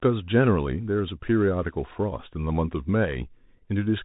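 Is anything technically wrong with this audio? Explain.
Yes. Throughout, the speech carries the Bluetooth CVSD headset codec: one-bit up/down steps with adaptive size, consistent with a 64 kbps link, leave nothing above 3.8 kHz, plus grainy hiss and scratchy sibilants.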